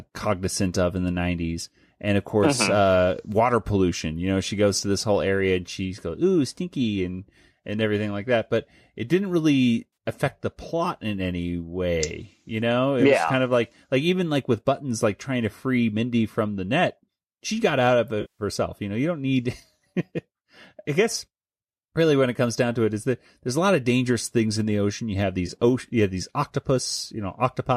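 Three spots of AAC frame loss with concealment show up in the speech. At 9.93 to 9.97 s there's a brief smeared, phasey blip about 40 ms long. At 18.21 to 18.43 s a 180 ms gap decays toward silence and then fades back in. At 25.47 to 25.50 s there's a 20 ms noisy smudge. In each case the decoder lost frames and patched the gap from the last good spectrum, and the short timing fits the roughly 10 ms frames of the likely low-delay AAC stream.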